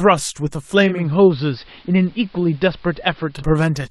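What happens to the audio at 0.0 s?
Nothing goes wrong at 0.0 s: the audio there is intact, with no audible fault.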